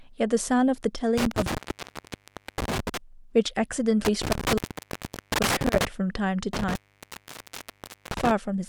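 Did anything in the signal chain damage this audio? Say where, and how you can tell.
Yes: the speech cuts out with crackle around 1.18–2.97 s, 4.05–5.85 s and 6.53–8.31 s. This is an intermittent contact in the analogue wiring, where a loose cable or plug briefly opens.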